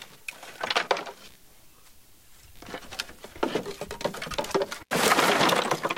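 Computer activity noise runs under the whole clip: a faint buzzing chirp, pulsing around 70 times a second and sitting roughly 35 dB below the sounds. It rises and falls with the computer's workload rather than with the recorded sound, because changing processor or graphics load disturbs the ground the audio circuit shares. On a spectrogram it shows as evenly spaced vertical striations with a comb of harmonics; the waveform carries a low, spiky ripple.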